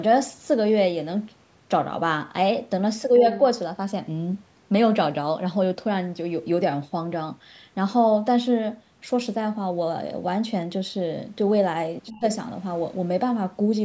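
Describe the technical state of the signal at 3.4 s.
Right around there, from 3.35 to 3.39 s, a brief scrap of a second voice pokes through, roughly 15 dB under the main speech. It's likely the other side's voice leaking through: far-end audio from the loudspeaker that the echo canceller didn't fully scrub.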